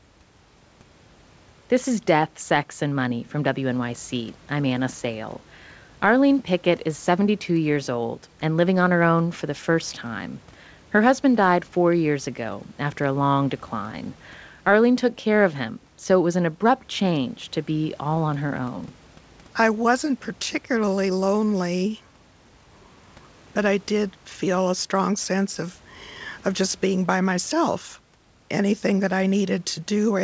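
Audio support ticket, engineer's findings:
No faults found; call path behaves as expected, with the codec's band limit leaving nothing above 8 kHz and room noise sitting about 34 dB below the speech.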